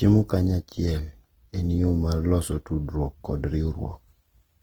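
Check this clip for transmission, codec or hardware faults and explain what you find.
The clip has one fault, present throughout: likely Opus compression. Running in its music-style transform mode, the encoder keeps each band's energy but fills starved bands with folded or noise-like content, so the speech sounds grainy and rough rather than swirly, consistent with a rate around 16 kbps, though the full bandwidth up to about 20.2 kHz remains.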